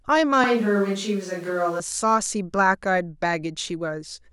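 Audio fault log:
0.44 to 1.80 s, switch to a distant microphone: the speech abruptly turns roomy and hollow, with thinner low end, and snaps back just as suddenly at 1.80 s. The overall level barely changes, but room noise rises to roughly 30 dB under the speech. The likely cause is that the close microphone dropped out and the recording fell back to a microphone further away, which captures more reflected sound and ambience relative to the direct voice.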